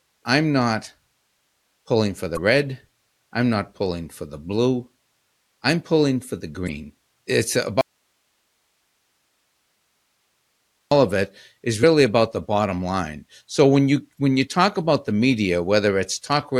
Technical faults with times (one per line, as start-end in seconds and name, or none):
2.34-2.38 damaged data in a compressed stream
6.65-6.69 damaged data in a compressed stream
7.81-10.91 audio dropout to a faint residue
11.82 damaged data in a compressed stream
14.15-14.19 damaged data in a compressed stream